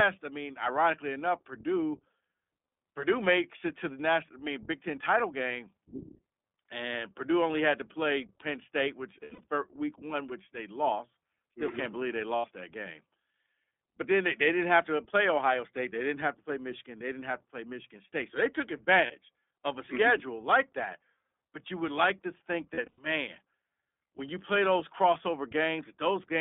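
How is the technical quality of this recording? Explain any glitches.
The recording has plainly audible codec damage throughout and four short dropouts.

iLBC codec, throughout: the speech sits in a narrow 250 Hz to 3.6 kHz band. Each 20 ms frame is coded independently, leaving the voice clear but rough and slightly synthetic.

Lost iLBC frames:
At 9.2 to 9.45 s, before "week one which they", scattered gaps with runs up to about 70 ms.
At 12.36 to 12.46 s, between "can't believe they" and "that game".
At 19.06 to 19.12 s.
At 22.74 to 23.0 s, after "would like to think".

The decoder fills each gap by repeating the last pitch cycle with added noise, giving a brief buzzy held vowel. Recovery is almost immediate.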